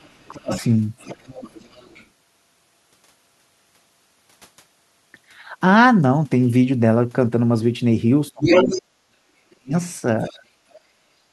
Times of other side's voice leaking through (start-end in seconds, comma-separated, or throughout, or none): 0.00-0.67, 0.98-2.06, 8.43-8.81, 10.19-10.37